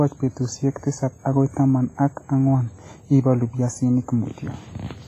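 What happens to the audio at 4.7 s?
At 4.7 s, as throughout the clip, the speech sounds ringing and washy, with a hiss that breathes. This is heavy WMA compression. Coarse quantisation smears over long blocks. Nothing sits above 15.4 kHz, likely from an encode of about 24 kbps.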